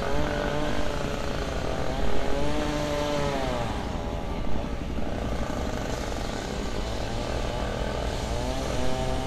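No audible technical faults here.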